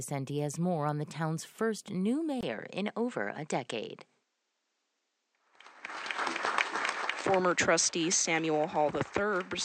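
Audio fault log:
2.41–9.64 s, input switched to a poorer device: after a 20 ms gap, the sound loses everything above 8.6 kHz and turns duller, with a faint new noise floor well under the signal and little level change. This is likely a switch to a narrower-band microphone.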